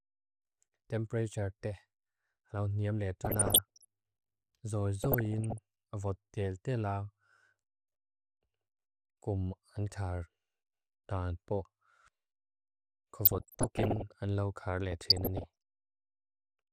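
Weak DAB reception let bit errors slip past error correction into the MP2 data, garbling samples into short noise blips in single sub-bands and scale factors so sub-bands leap in level for up to a frame. This DAB burbling gives bubbling squelches or watery blips over the speech at 3.24–3.85 s after "alaw neam", 5.02–5.58 s, 13.25–14.02 s before "ang lau kar", and 14.92–15.44 s after it. The first and third bursts are the harsher, pointing to around one percent bit errors against about half that in the others.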